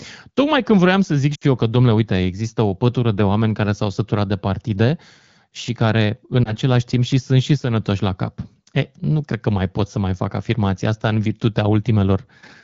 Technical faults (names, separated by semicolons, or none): lost AMR speech frames